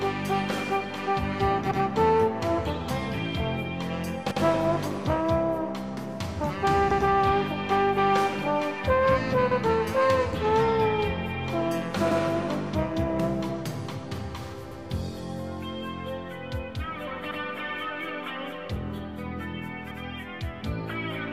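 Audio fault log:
1.71, 4.31, 6.91, 9.51, 12.11, 14.71, 17.31 and 19.91 s: overlapping chunks. Each 2.5 s chunk begins 100 ms early, so that stretch replays, giving a stutter every 2.6 s.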